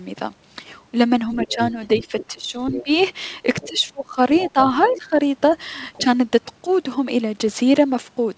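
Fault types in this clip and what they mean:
Other side's voice leaking through: the echo canceller likely left loudspeaker echo in the microphone signal, so a second voice surfaces in scraps about 10 to 20 dB down.
Speech suppressed in double talk: with both sides talking, the echo canceller likely attenuated everything, so the speech dips by up to about 20 dB between 1.34 and 2.89 s and between 3.64 and 5.18 s.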